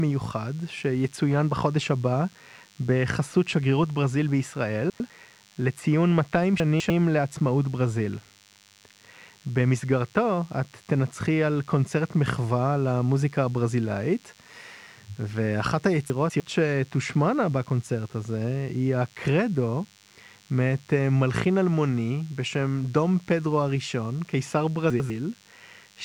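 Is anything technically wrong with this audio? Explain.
Yes. A DECT cordless phone buzz runs throughout: radio bursts every 10 ms are rectified into a thin 100 Hz buzz, well below the speech. Its hard, harmonic-rich edge sets it apart from smooth mains hum.

Chunks out of order occur at 4.9–5.1 s, 6.6–6.9 s, 16.1–16.4 s and 24.9–25.1 s. A 100 ms chunk plays one or two chunks late, causing a jumbled moment. Unlike a dropout, nothing goes missing.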